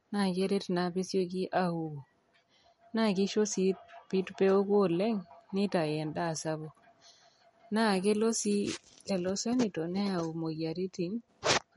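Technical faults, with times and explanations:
Throughout, MP3 compression: watery, swirly speech with nothing above 11.2 kHz, likely from a bit-starved MP3 encode (fits about 48 kbps) that cuts treble and switches weak frequencies on and off.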